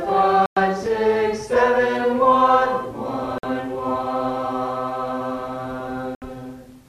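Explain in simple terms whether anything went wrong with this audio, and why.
Bluetooth stalls at 0.46, 3.38 and 6.15 seconds: the sound drops to silence three times, for about 0.11, 0.05 and 0.07 seconds, then carries on. The likely cause is wireless interference holding up the audio on its way to the headphones. Their small store of waiting sound ran out, so playback paused until the delayed pieces arrived and it could pick up again.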